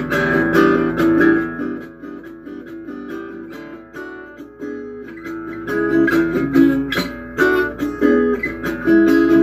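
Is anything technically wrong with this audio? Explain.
No, nothing technically wrong turns up on listening; the level changes smoothly at times, but there are no defects to report.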